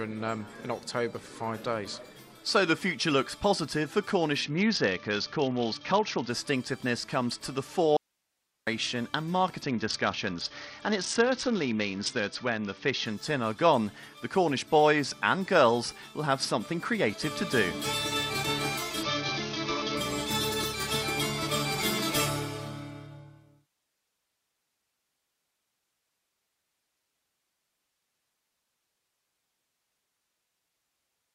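From 4.44 to 6.30 s, 9.62 to 13.06 s and 19.03 to 19.97 s, a Bluetooth SBC bit pool drop dulls the treble and adds gritty quantisation noise. This fits the bit pool falling from 28 to about 7, roughly 66 kbps. Unlike a steady low-bitrate encode, the sound snaps back to full brightness when each episode ends. From 7.97 to 8.67 s, an audio dropout to a faint residue cuts the sound abruptly for 0.7 s, leaving only hiss around 50 dB down. This is likely a lost signal on a still-live path. The hard edges and the hiss in the gap set it apart from a pause or fade.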